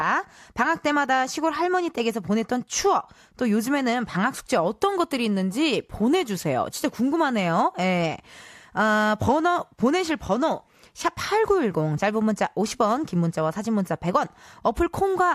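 No technical faults can be heard anywhere in the speech recording; the signal stays continuous and stable throughout.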